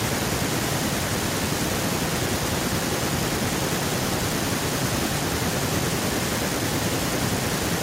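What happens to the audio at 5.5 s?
Nothing goes wrong at 5.5 s: the audio there is intact, with no dropout, click or distortion.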